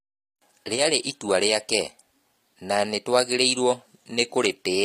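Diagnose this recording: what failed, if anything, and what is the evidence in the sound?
The codec stage has failed audibly throughout: the speech has gritty, metallic sibilants and a treble that sounds bright but synthetic, likely from HE-AAC compression at a low bitrate, around 24 kbps. On a spectrogram the upper band looks like a smeared copy of the region below it, with harmonics that do not continue across the crossover and a hard ceiling near 15.4 kHz. This is spectral band replication patching transposed low-band content upward under a coarse envelope.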